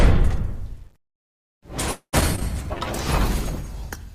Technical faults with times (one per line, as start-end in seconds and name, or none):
1.91-2.15 call audio freeze
2.21-2.43 short concealed packet loss
2.49-4.15 call bitrate drop